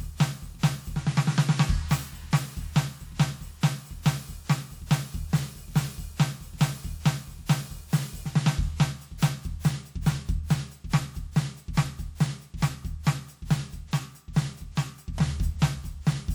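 Music, with one pre-echo at about 9.18 s. A short hiss rises for about 36 ms before a sharp attack, which lands at 9.22 s. The codec spread its quantisation noise across the whole transform block. That noise then filled the quiet gap ahead of the attack and blurred its edge.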